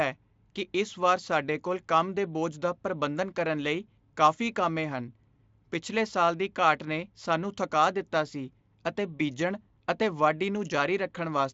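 VoIP packet loss concealed by the speech codec, 9.17 to 9.22 s: Speex extrapolated over a missing 20 ms frame, giving a brief fading buzzy tone or coloured noise.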